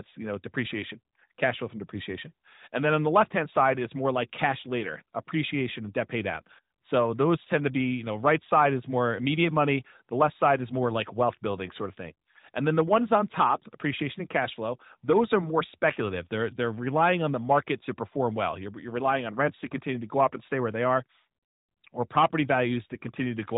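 Listening through this speech clip, nothing stood out as a technical fault.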